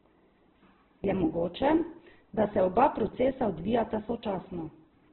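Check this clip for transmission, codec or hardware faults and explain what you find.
There is one fault, and it runs through the whole clip.

Opus compression, present throughout: the speech stops at about 4.1 kHz, which points to narrowband operation at a very low bitrate, fitting something near 8 kbps. The likely cause is the encoder in its music-oriented mode keeping only coarse band energies and filling the missing detail with folded or noise-like content. The speech sounds muffled and band-limited, with heavy damage: it comes across rough, grainy and noisy rather than clean.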